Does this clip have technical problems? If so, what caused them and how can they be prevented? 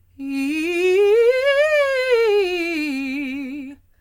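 No, no technical faults here.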